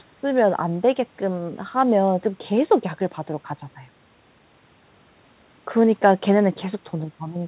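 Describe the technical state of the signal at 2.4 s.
At 2.4 s the signal is intact, with only the quiet room noise about 38 dB below the speech and the expected narrowband sound of a G.711 mu-law call path, which carries nothing above 4 kHz.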